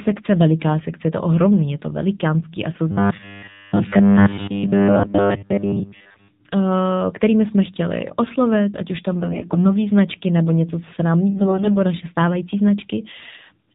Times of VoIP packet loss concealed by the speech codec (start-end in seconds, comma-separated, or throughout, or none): none